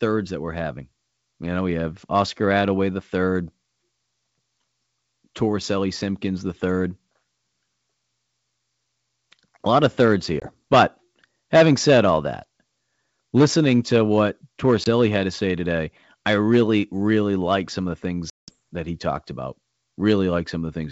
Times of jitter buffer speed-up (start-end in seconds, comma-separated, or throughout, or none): none